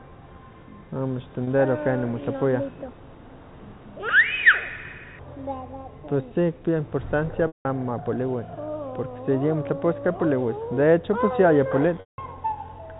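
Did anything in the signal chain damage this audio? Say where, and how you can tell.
Yes: network packet loss with pitch repetition. The concealment repeats the last pitch period, so 1.44–1.47 s holds buzzily, while 7.47–7.65 s and 12.0–12.18 s fade to silence.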